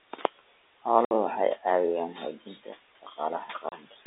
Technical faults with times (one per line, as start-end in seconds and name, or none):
0.00-4.06 noise suppressor artifacts
0.13-0.49 speech cut by the noise suppressor
1.05-1.11 packet loss filled with silence
3.02-3.99 speech cut by the noise suppressor
3.69-3.72 packet loss filled with silence